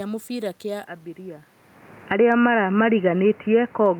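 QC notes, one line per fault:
0.86–4.0 s, input switched to a poorer device: from 0.86 s the speech turns dull and boxy with nothing above 3 kHz, drops roughly 5 dB in level and picks up a new noise floor around 30 dB below the signal, with no gap at the switch; this likely reflects a change to another microphone or a headset call profile.
1.96–2.4 s, automatic gain falling: the gain control judged the input too loud, or its background noise too strong for its gain, and pulled its gain down by about 9 dB over less than half a second, so the speech and its background sink together rather than the speech alone getting quieter.
2.34–3.14 s, automatic gain rising: overlapping the end of that dip, the gain control reversed and raised its gain by about 4 dB across roughly 0.8 s, so speech and background swell back up together; the level change near 1.5 s from the talker's movement is separate from this.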